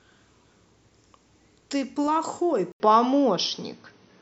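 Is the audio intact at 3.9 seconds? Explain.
No, at 3.9 s you're inside a stretch that runs from 2.72 s to the end, after the input likely switched to a poorer device. Right at the switch there's a gap of about 80 ms. After it the speech loses everything above 6.2 kHz, so it sounds duller and boxier. The level shifts by roughly 5 dB, and a faint new background noise sits about 50 dB below the speech, all typical of a different, narrower-band microphone path.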